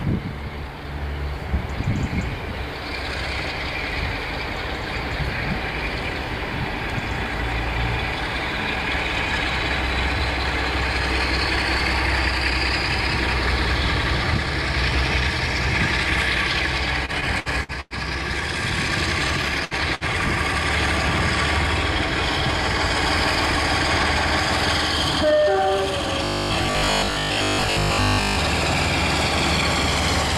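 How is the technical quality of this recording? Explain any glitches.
The recording has four glitches, all in its second half.

From 17.05 to 17.94 s the sound turns choppy and robotic, with pieces dropping out. This is repeated packet loss (robotic sound). Five separate gaps hit in quick succession, the longest 101 ms. Each was patched by extending the last sound, covering 252 ms in total, or about 29% of that stretch. About 120 ms of real audio never arrives, so the patches and the skips together produce the broken, mechanical texture.

At 19.65 to 19.74 s the sound briefly freezes into a held, fading continuation, then jumps ahead. This is a burst of packet loss. A run of packets went missing, and the receiver filled 63 ms by continuing the last sound and turning it down. When playback resumes, about 60 ms of the original has been skipped, so the audio picks up slightly further on than where it stopped.

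Just after, from 19.95 to 20.04 s, a sound hangs on too long before carrying on. This is a short stall from a late packet. The packet wasn't there when it was due, so the jitter buffer ran dry and the receiver stretched the last sound for 58 ms until it came in. Playback then continued from the same point. Nothing is lost, but the delay grows by 58 ms.

From 26.25 to 28.37 s the sound becomes a rigid, metallic buzz at 50 Hz that only roughly tracks the original. For most of this stretch, short slices are repeated in place of new audio. This is robotic sound from repeated short buffers. The likely cause is audio arriving too seldom, with the software re-playing the last chunk to fill time. A 50 Hz buzz fits a repeated 20 ms buffer, while the real audio in between is skipped.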